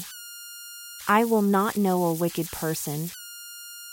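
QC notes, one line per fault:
throughout, converter idle tones: the delta-sigma converter runs undithered, so low-level input locks it into repeating bit patterns. These sound as a whistle around 1.5 kHz in pauses and grainy noise under quiet speech, about 16 dB below the speech.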